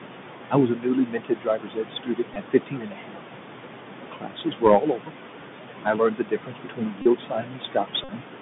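A speech recording carried over a Bluetooth headset link, with room noise sitting about 9 dB below the voice. The Bluetooth CVSD headset codec colours the whole clip: the band runs only from about 150 Hz to 3.6 kHz, s sounds come out scratchy, and a grainy hiss rides under the voice. Unlike plain band-limiting, loud bright syllables distort because the one-bit up/down step cannot keep pace with them. Noise suppressor artifacts run throughout. The background drops by about 18 dB in the gaps and swells back under each phrase. This pumping follows the speech itself, which separates it from a steady hiss or hum. Speech cut by the noise suppressor happens in three stretches: 0.5 to 3.22 s, 4.01 to 5.13 s and 5.83 to 8.24 s. Quiet consonants and word endings are pulled down by up to about 19 dB, roughly 2 s in total in the first and last stretches and under a second in the middle one. They sound swallowed rather than clipped off at a hard edge, as a dropout would be. 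A Bluetooth headset packet repeated fault gives a brief buzz near 267 Hz at 2.34 s, where four 3.75 ms packets were lost. At 7.02 to 7.06 s and 8.04 to 8.10 s it returns as a short steady buzz near 267 Hz. That pitched buzz sets it apart from a silent gap or a broadband click.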